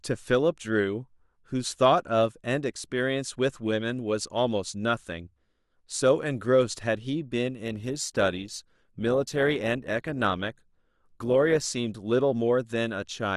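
From 7.65 to 11.65 s the speech drops abruptly to an adaptive stream at a lower bitrate, about 24 kbit/s. Codec artefacts rise, without any waveform gap.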